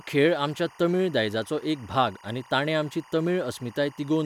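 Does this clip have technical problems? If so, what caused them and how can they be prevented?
Yes. Linear timecode running at 24 frames per second has leaked from a neighbouring track or cable into the speech channel, producing timecode bleed for the whole clip. The code is a square wave flipping between two pitches near 1 kHz and 2 kHz, so a steady chirping warble sits behind the speech from start to finish, roughly 25 dB below it. Prevent it by keeping timecode on well-separated, shielded lines and tracks, away from audio inputs and cabling.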